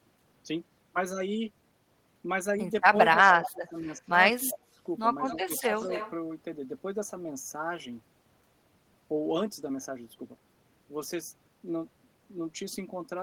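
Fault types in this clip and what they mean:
Speech suppressed in double talk: the voice sags in pieces by up to about 20 dB at 2.91–3.88 s, 4.36–4.81 s and 5.35–5.52 s, likely an echo canceller turning down its own talker along with the loudspeaker echo. It is a level drop, not clean silence as in a dropout.
Echo leak: a faint copy of the voice, about 15 to 20 dB down and trailing by 236 to 242 ms, appears at 3.11–3.71 s, 4.48–4.57 s and 5.28–6.11 s. That fixed delay separates it from the smooth decay of room reverberation.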